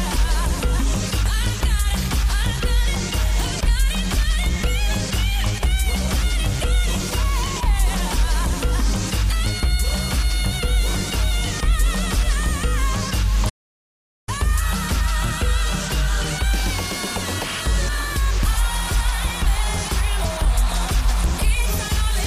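At 13.49 s the sound cuts off mid-flow and stays silent until 14.29 s, a playback stall of about 0.78 s, likely from the player running out of data or its thread being blocked. The waveform flatlines, and the spectrogram shows a blank vertical band across all frequencies.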